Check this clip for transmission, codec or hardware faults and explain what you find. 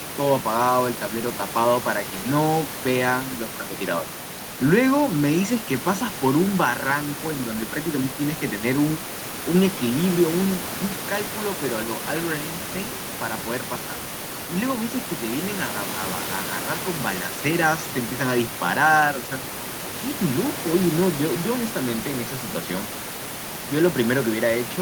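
The signal carries the speech without any technical fault, and the only background is the room's own noise, sitting about 12 dB below the speech as part of the original recording.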